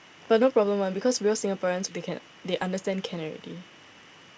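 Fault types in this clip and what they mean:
Skip ahead: At 1.88 to 1.90 s, roughly 0.4 s of speech is dropped with no fill, so the sound jumps forward. The waveform shows two unrelated segments butted together, and the spectrogram shows an abrupt vertical seam where formants and harmonics change instantly.
Jitter buffer speed-up: From 1.97 to 2.85 s, the receiver trims short pitch-period chunks, about 70 ms in total, to shrink an oversized buffer. Speech runs at 107% speed with unchanged pitch, sounding slightly hurried. Syllables look compressed in time, while harmonic spacing stays the same.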